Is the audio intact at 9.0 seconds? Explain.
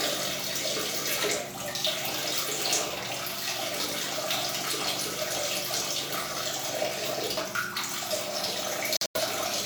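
No, there's a corrupt frame muted from 8.97 to 9.20 s: damaged compressed frames were rejected and swapped for silence, leaving an abrupt gap, which fits about four frames.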